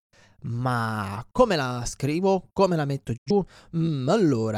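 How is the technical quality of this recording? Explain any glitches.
The speech has one audible glitch. A digital broadcast dropout at 3.16 to 3.32 s: the receiver lost valid frames and muted, so the sound fades out over about 20 ms, leaving roughly 85 ms missing, consistent with two dropped frames.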